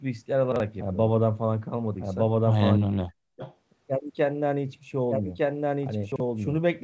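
Right from the start there's a doubled audio track: the whole clip of speech has a second copy riding along roughly a second behind, at about the same level, with no room tail on it. It's likely captured twice through a slower path, or an edit left two copies out of step.

At 0.52 to 0.60 s you get chunks out of order. A 40 ms chunk landed one slot late, so it plays after its neighbour. Nothing's missing, but the order scrambles briefly at the hard joins.

Then from 2.79 to 3.41 s there's speech suppressed in double talk. The voice ducks, by as much as about 40 dB at the worst point, for roughly half a second in total. The likely cause is an echo canceller that couldn't tell this talker from loudspeaker echo while both sides spoke.

Right after, 3.41 to 3.56 s, there's an echo leak: a faint copy of the voice, about 25 dB down, trailing by 308 ms. One side's canceller likely didn't fully scrub what its mic heard off the speaker.

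Finally, 6.12 to 6.20 s repeats the chunks-out-of-order glitch, again a 40 ms chunk one place late, with the same jumbled blip.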